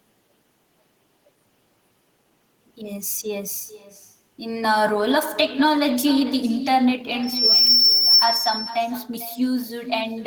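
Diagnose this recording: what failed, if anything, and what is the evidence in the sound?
Call processing: echo with no canceller runs throughout. The speech returns around 400 ms late, about 11 dB down, because the far end's loudspeaker leaks into its microphone unremoved.

Acoustic loop at playback: a loudspeaker feedback squeal at 5.4 kHz from 7.23 to 8.29 s, swelling in under half a second to about 10 dB above the speech.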